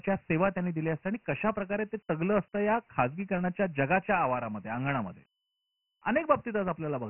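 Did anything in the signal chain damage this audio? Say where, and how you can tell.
Yes, at the codec stage. Throughout the speech the band stops dead at 3 kHz, and a gritty, granular hiss rides along with every syllable, rising and falling with the level. That points to Dialogic VOX ADPCM at 6,000 samples a second, about 24 kbps, heavily degraded. Each sample is coded as a coarse 4-bit step, so quantisation noise tracks the signal. A spectrogram shows a hard ceiling at 3 kHz with speckled noise filling the harmonics below it.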